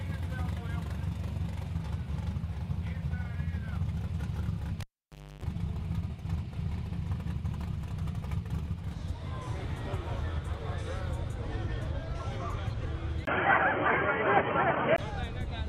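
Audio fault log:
4.81–5.44 s, cable pulled and plugged in: a pop, then about 0.58 s of near silence with the connection broken, including roughly 0.29 s of 50 Hz mains buzz while only the plug tip makes contact, then a second pop as the full connection returns.
13.25–14.98 s, input switched to a poorer device: after a 20 ms gap, the sound turns dull and boxy with nothing above 3.2 kHz, a level shift of around 5 dB and new background noise roughly 40 dB below the signal. This likely comes from a change to a narrower-band microphone or headset path.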